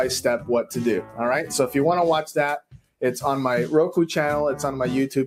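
A noise suppressor applied to music or sounds runs through the whole clip. It was built for speech, so it treats steady tones, ambience and reverb as noise. It turns them down, then lets them back up. The level swings by roughly 5 dB as it does this. Onsets come through, but sustained parts sag. The result is a restless, pumping quality, with tails that thin out rather than ring.

At 1.02 s the suppressor cuts the sound itself. The dip lasts to 1.19 s, about 150 ms. It drops by about 10 dB at its deepest. A second, larger cut runs from 2.59 to 3.02 s, roughly 400 ms. Here the drop reaches about 18 dB. In both places the detector mistook held or fading sound for noise. That material briefly sinks or loses its decay.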